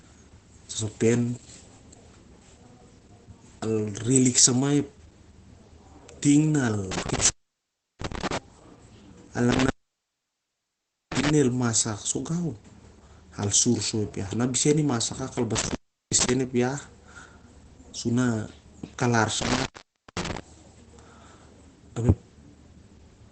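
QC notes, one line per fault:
Throughout: Opus compression. The speech sounds muffled and hoarse, and nothing remains above about 8.7 kHz. This hard ceiling and the husky quality point to the codec's speech mode at a low rate, likely around 12 kbps. MP3 damage swirls and leaves warbling gaps in the spectrum. Here the damage is heavy but steady hoarseness and a narrowed band, with no watery holes.
6.92–8.38, 9.51–11.30, 15.56–16.30, 19.42–20.40 s: intermittent contact. In each span the signal path opens for about 0.70, 1.42, 0.37 and 0.52 s respectively. The audio cuts out with crackle as the contact breaks and remakes, and faint hiss sits in the gap. A network or packet dropout gives a clean digital silence or a smoothed concealment. Here the edges crackle and some noise remains while the line is open.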